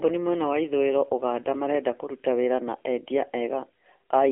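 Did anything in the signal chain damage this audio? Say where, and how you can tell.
Yes, the codec stage did it, across the whole clip. This is AMR narrowband mobile codec damage: nothing gets through above 3.7 kHz, and the band sits roughly between 300 Hz and 3.6 kHz, like a phone line. The speech has a plainly audible buzzy, synthetic edge, which fits one of AMR-NB's lower modes, around 7.4 kbps. At that rate the codec rebuilds the voice from a vocal-tract model driven by a few pulses, so the fine detail goes missing.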